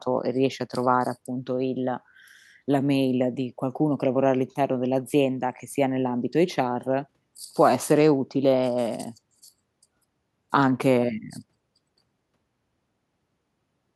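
Speech recording with no technical fault to be heard. Level and timing hold steady throughout, and nothing breaks or interrupts the audio at any point.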